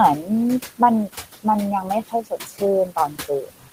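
A short speech recording carries noise suppressor artifacts throughout: the room noise, about 12 dB below the speech, is pulled down by about 12 dB in gaps, leaving a residue that shows on a spectrogram as patchy, blotchy low-level texture. Speech is also cut by the noise suppressor from 1.83 to 2.62 s, where roughly 0.4 s of softer speech is dragged down by up to about 17 dB, and again from 2.86 s to the end, with drops of up to about 19 dB. The suppressor mistakes these quieter stretches for noise, so they sound swallowed, and the waveform envelope and spectrogram energy drop there.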